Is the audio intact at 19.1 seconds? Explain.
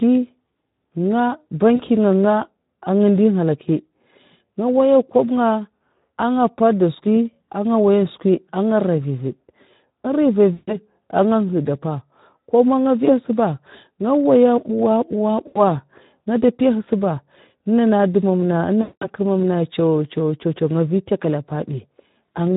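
No. At 19.1 s the audio is at the tail of a VoIP packet loss concealed by the speech codec, spanning 18.81 to 19.11 s. About 200 ms of packets went missing, which fits ten 20 ms frames, and the decoder filled the gap by repeating its last pitch and filter settings with falling gain. The speech smears into a buzzy tone or a coloured noise that fades. On a spectrogram, the harmonics flatten into frozen horizontal stripes. In the waveform, the envelope decays smoothly instead of following syllables, and it stays weak or distorted just after the packets return.

The whole clip also carries the Speex codec at plainly audible damage, with a bitrate that fits an 11 kbps mode. With so few bits for the excitation, the speech sounds hoarse and noisy. On a spectrogram, the harmonics look blurred.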